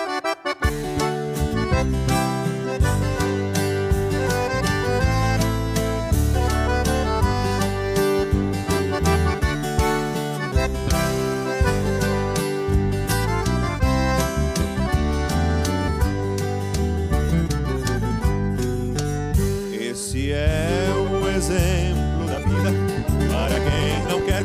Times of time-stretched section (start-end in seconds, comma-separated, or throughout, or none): 22.21-24.45